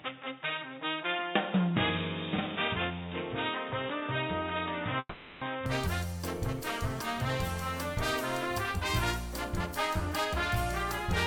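For the first 5.66 seconds the audio is band-limited, with nothing above 3.8 kHz, then opens up with no gap or level jump, likely an input switched to a poorer device such as a headset call profile, with faint extra noise well below the signal. From 4.99 to 5.43 s there's a long network dropout, likely with about 420 ms papered over by a fading buzzy continuation ending in a brief 40 ms silence before the sound resumes.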